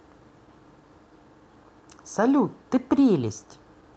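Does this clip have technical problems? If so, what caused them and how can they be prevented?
Yes. Two brief patches of rougher, grainier speech occur, from 2.23 to 2.25 s and from 3.15 to 3.17 s, each lasting 20 ms with no silence or dropout. This is a lost packet rebuilt from error correction. In each case one packet failed to arrive, and the decoder filled the 20 ms from a low-bitrate backup copy carried in the next Opus packet (in-band forward error correction). That coarser copy is the short burst of added noise. Reducing packet loss on the network, for example by prioritising call traffic or using a more stable connection, prevents it.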